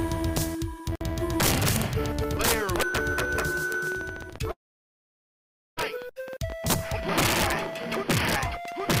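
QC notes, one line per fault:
throughout: integer overflow. The level is pushed about 6 dB past full scale, and a small fraction of peaks wrap to the opposite sign instead of being limited. Unlike clipping, which flattens peaks into dull distortion, each wrap flips across the full range, giving violent, sharp cracks only on the loudest moments.
2.24 s to the end: train of clicks. Roughly 11.8 similar pulses per second arrive at an uneven pace, peaking about 5 dB above the sound itself, most likely from interference or a faulty connection. Unlike the overflow cracks, they ignore loudness and tick through quiet passages and pauses alike.
4.51 to 5.79 s: long network dropout. About 1.26 s of audio likely never arrived. The receiver briefly carries the last sound on as a fading buzz or hiss, then about 1.21 s of silence follows before the audio resumes further on, with the lost stretch skipped rather than delayed.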